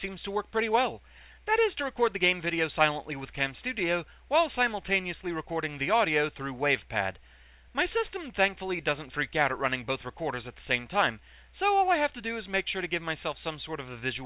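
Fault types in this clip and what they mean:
Dropped samples: a handful of samples, a fraction of a millisecond, were likely lost from the stream, so the waveform leaps straight to a later value. At 12.84 s this is heard as one sharp, isolated click, with no audible gap around it.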